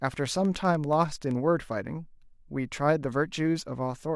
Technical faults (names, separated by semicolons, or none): train of clicks